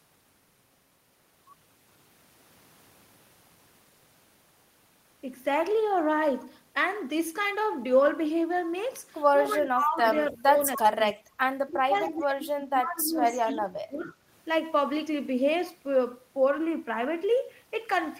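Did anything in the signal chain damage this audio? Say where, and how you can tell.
Yes, the call processing stage did, with the echo canceller struggling while both ends talked. The speech is suppressed in double talk from 9.58 to 9.99 s, 10.31 to 10.62 s, 10.78 to 10.85 s, 11.13 to 11.27 s, and for a long stretch from 11.68 to 14.13 s. In those windows the voice drops by up to about 25 dB or breaks up, likely because the canceller couldn't tell the near talker from loudspeaker echo and ducked everything.

There's also echo leak at the same stage: faint delayed copies of the voice at 11.1 s, 12.02 to 12.21 s and 14.1 s, sitting about 30 to 35 dB below the speech. Each one trails its source by 291 ms, which gives it away as a returned echo and not background noise. The likely cause is that the far end's canceller didn't fully remove what its microphone picked up from its loudspeaker, so scraps got sent back.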